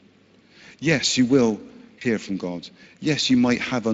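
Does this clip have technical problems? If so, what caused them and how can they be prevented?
Yes. The whole recording carries Speex codec damage: a hoarse, grainy, noisy texture, consistent with a bitrate around 20 kbps. This CELP coder has too few bits for the excitation signal, so on a spectrogram the harmonics look smeared, with noise filling the gaps between them. To prevent it, use a higher Speex quality setting or a modern codec such as Opus.

Around 1.99 to 2.03 s there is VoIP packet loss concealed by the speech codec, which fits one lost 20 ms frame. The decoder repeats its last pitch and filter while fading the gain, so the sound is briefly stretched out. The waveform shows a short repeated cycle shrinking in amplitude, and the spectrogram shows flattened, stretched harmonics. A jitter buffer, forward error correction or a more reliable network path would reduce the loss.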